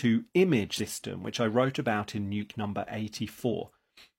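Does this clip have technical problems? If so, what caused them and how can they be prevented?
Yes. The speech has compressed frames skipped in three places: at 0.75–0.80 s, just before "which I wrote about"; at 2.37–2.42 s, right after "I wrote about in"; and at 3.49–3.54 s. Each time the audio jumps forward, dropping about 100 ms, 150 ms and 100 ms respectively. That fits two or three missing frames of roughly 46 ms, either absent from the file or rejected by the decoder as damaged. Preventing it means using a transport with error checking or retransmission and verifying file integrity before decoding.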